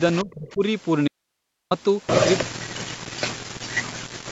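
From 0.13 to 0.34 s there is an echo leak: a faint copy of the speech, lagging by 313 ms, sits about 20 dB below it. The likely cause is a loudspeaker echo canceller letting its far-end sound return down the line.

Overlapping that, from 0.24 to 0.62 s, comes speech suppressed in double talk. The voice sinks by as much as about 30 dB. Both sides were likely talking at once, so the canceller turned down everything, wanted speech included.

From 1.08 to 1.71 s there is an audio dropout to a faint residue. The speech vanishes abruptly for 631 ms. Only a very faint hiss remains, far beneath the signal. The break is sudden, not a pause. The likely cause is a lost signal on a path that stayed open.

The echo leak returns at 2.38 to 2.44 s, louder now, about 10 dB under the speech, again 313 ms late.

From 2.44 s to the end, double-talk suppression takes over for around two seconds. The speech dips, at worst by about 40 dB.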